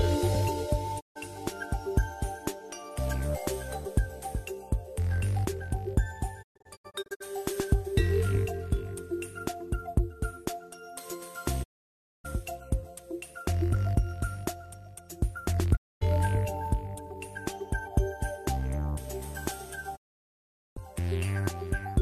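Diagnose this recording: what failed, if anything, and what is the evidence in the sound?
The digital broadcast receiver lost the signal or rejected corrupted frames, muting until clean ones returned: a digital broadcast dropout. The sound fades out over 20 ms and vanishes at 0.99, 6.41 (several short holes), 11.62, 15.75 and 19.95 s, for up to 0.79 s.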